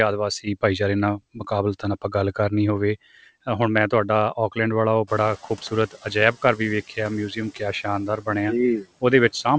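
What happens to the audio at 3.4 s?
Noise suppressor artifacts run through the whole clip: residual noise is pulled down about 17 dB between syllables and swells beneath them, unlike a gate's abrupt on-off clicks.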